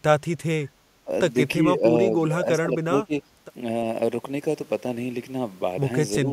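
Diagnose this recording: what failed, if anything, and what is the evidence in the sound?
The whole clip sounds hollow and phasey because of channel delay (comb filtering) at the mono-sum stage. One channel runs a fraction of a millisecond late, a few samples' worth. When the two are added, the shared content cancels at evenly spaced notches, the first one somewhere around 1.5 kHz.

In call processing, the speech dips and thins in four spots: 0.44–0.50 s, 1.05–1.11 s, 1.59–1.83 s, and the longest stretch at 2.09–3.13 s. The drops run roughly 10 to 20 dB. That pattern points to likely speech suppressed in double talk, with the echo canceller ducking the near talker while the far side was also talking.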